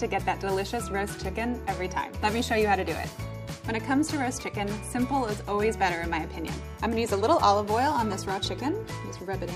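No technical fault can be heard anywhere in the audio, and the signal stays continuous and stable throughout.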